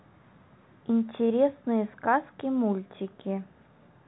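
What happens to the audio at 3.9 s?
Nothing goes wrong at 3.9 s: the speech carries on intact there, with the narrow telephone-band sound of G.711 coding cutting everything above about 3.9 kHz.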